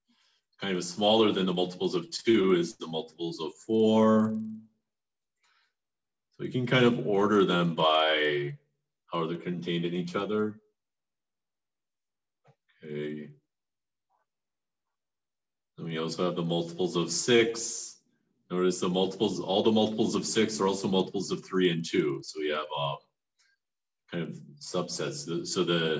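Steady ticks at 20 Hz run through the whole audio, present only with signal: a resampler restarted on every 50 ms block while converting 24 kHz to 16 kHz. Their strict regularity rules out random dropout clicks.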